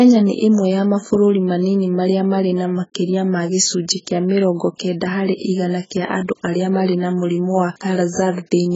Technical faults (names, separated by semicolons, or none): AAC compression